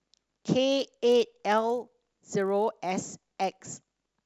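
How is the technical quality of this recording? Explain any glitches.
The recording has one clear fault: the resampler was restarted on every block, from 0.7 s to the end of the speech.

From 0.7 s onward, the sample-rate converter treated each 20 ms block as an isolated piece, with no memory of the samples on either side. Its filter filled those missing neighbours with silence or wrapped-around material, leaving a small error at every block boundary. This fits a conversion from 48 kHz down to 24 kHz. Those errors repeat 50 times a second, producing a low, steady buzz riding on the speech that is present only when there is signal.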